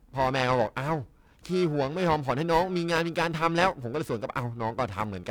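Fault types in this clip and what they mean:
Periodic clock jitter: the converter's sample clock is wobbling at a steady rate of around 1 kHz, so every component of the speech carries sidebands spaced about that far above and below it, strongest on the high frequencies, giving a rough, metallic edge throughout.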